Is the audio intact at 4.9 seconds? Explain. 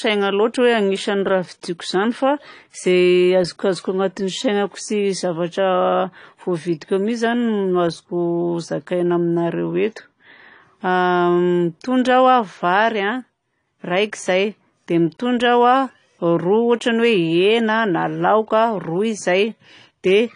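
No. At 4.9 seconds the speech sounds dull and smeared, with a warbling, fizzy texture on sustained sounds and sibilants, and that damage runs through the whole clip rather than just this moment. It is likely AAC compression, with AAC-LC at a low rate that points to roughly 32 kbps. With so few bits per frame, the encoder lowers its upper cut-off and quantises the remaining frequency lines coarsely, so detail is lost and artefacts are plainly audible.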